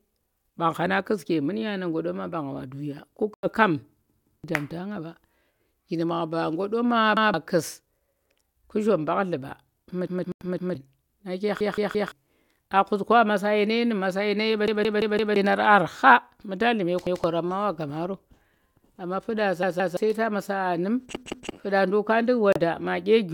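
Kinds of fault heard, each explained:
Bluetooth dropout: Three brief silences cut into the speech, at 3.34, 10.32 and 22.53 s, lasting 0.14, 0.1 and 0.07 s. Their edges are abrupt or fade over a few milliseconds. Speech resumes further on, as if it kept playing. The likely cause is packets reaching the headphones too late.
Repeated buffer: A 171 ms piece of speech plays again with a hard join at each repeat, which fits an 8192-sample buffer. This stutter occurs eight times between 4.1 and 21.5 s. Each has one to four extra plays, lasting up to about 0.7 s.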